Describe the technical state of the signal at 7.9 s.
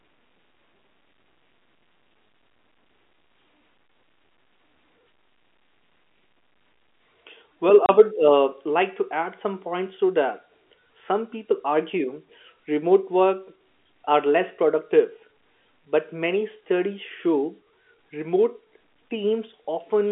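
At 7.86 to 7.89 s the speech drops out for 30 ms. This is packet loss filled with silence. A gap this length fits one lost packet, and the receiver played silence in its place. The hole has hard edges, inside the narrow telephone band of the G.711 line.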